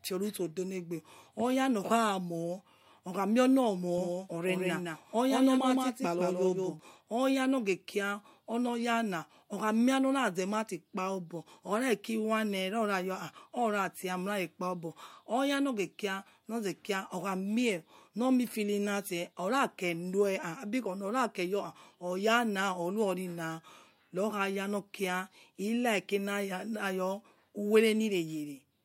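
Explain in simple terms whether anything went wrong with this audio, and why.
Doubled audio track, 3.98 to 6.80 s, after "okha mie on": a somewhat quieter copy trails about 0.15 seconds behind, likely from being recorded twice.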